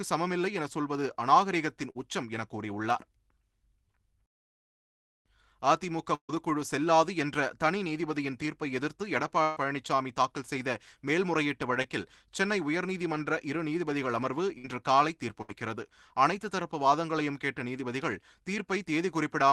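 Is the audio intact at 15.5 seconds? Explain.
No. A burst of packet loss runs from 15.42 to 15.50 s. The receiver extends the last received sound for about 65 ms, turning it down as it goes, then playback jumps ahead. Roughly 60 ms of the original audio is missing.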